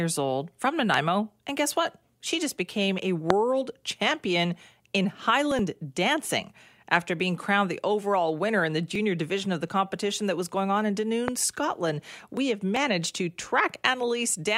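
A sudden voltage spike, likely from a switch, plug or static, hit the signal three times. Each loud pop is a single sharp crack over the continuing speech: 0.94–0.96 s after "old from", 3.30–3.32 s after "just became a" (about 25 dB above the speech), and 11.28–11.30 s after "was going on in" (the first and third about 20 dB).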